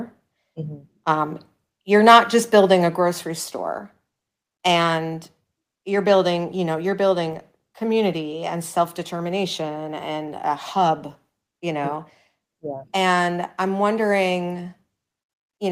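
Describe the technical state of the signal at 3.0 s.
Just before 3.0 s, at 2.97 s, the microphone volume stepped down: the speech and background both drop about 4 dB at once, likely because the call software lowered the input gain. The waveform envelope shows a clean step down, and the spectrogram darkens evenly across all frequencies.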